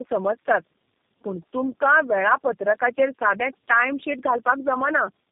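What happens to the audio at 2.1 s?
At 2.1 s, as throughout, tandem speech coding leaves speech rough, muffled and warbly, with nothing above 3.7 kHz. The damage compounds beyond any single codec, pointing to about three low-rate coders chained.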